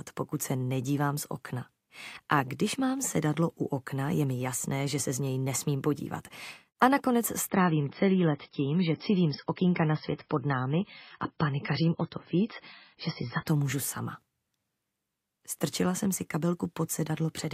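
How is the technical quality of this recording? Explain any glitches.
The recording has one clear glitch. An adaptive stream at a lower bitrate runs from 7.48 to 13.48 s, with nothing above 5.6 kHz. The treble turns dull and swirly with no gap, which fits the stream dropping from about 128 to 16 kbit/s MP3 while the connection slowed.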